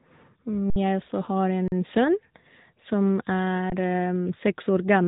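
Speech passed through the AMR narrowband mobile codec, a low-bitrate vocal-tract model, which caps the bandwidth at about 3.8 kHz and makes the voice plainly buzzy and synthetic, with damage that fits a mid-rate mode near 10 kbps. The output buffer also underran three times, with the converter holding its last sample for 60 ms at 0.70 s, 40 ms at 1.68 s and 20 ms at 3.70 s. The sound freezes briefly, then resumes where it stopped with only a soft edge.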